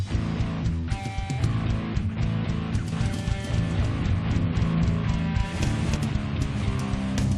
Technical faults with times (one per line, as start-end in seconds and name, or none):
2.92-5.96 doubled audio track